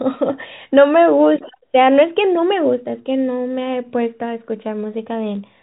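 The clip is speech carried over G.711 telephone coding, which limits it to the phone band with nothing above about 3.8 kHz, and nothing is technically wrong with it.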